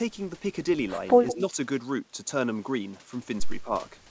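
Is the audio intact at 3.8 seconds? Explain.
Yes, the speech at 3.8 seconds is intact, passing through the call path as expected with the wideband ceiling at about 8 kHz that fits a G.722 codec.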